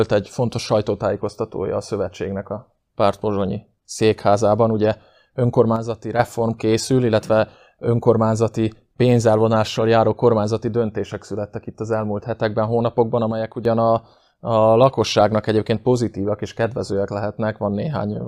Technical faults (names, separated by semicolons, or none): one channel drops out